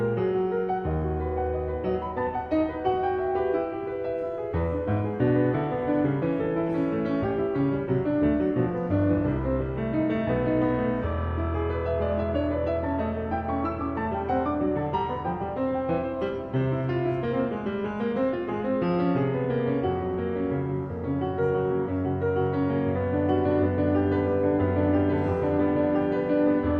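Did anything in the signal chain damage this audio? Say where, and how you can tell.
No, nothing in the signal chain has damaged this audio. There is no point where a stage can be heard altering the signal, so there is nothing to place or explain.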